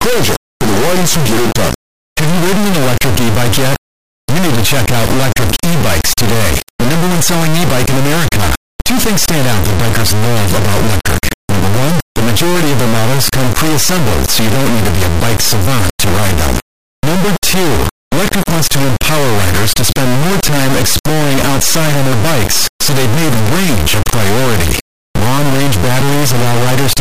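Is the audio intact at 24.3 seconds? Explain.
No. At 24.3 seconds, as throughout the speech clip, there is an integer read as float fault: 32-bit integer samples are interpreted as 32-bit float, so values land near zero or far past full scale, giving an extremely loud, buzzing square wave that falls silent in very quiet passages.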